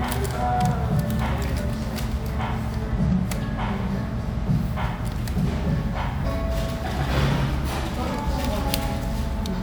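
No technical faults can be heard anywhere in this audio, and the signal stays intact throughout.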